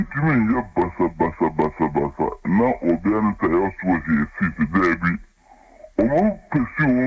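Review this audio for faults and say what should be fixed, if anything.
Everything sounds slowed and lowered throughout, running at about two thirds of normal speed and about 7 semitones flat. That is a wrong sample rate fault, with the samples played back slower than they were captured and no conversion. The 0.667 ratio fits 24 kHz material played at 16 kHz. To prevent it, resample to the output device's rate, or tag the file with its true rate so the player converts correctly.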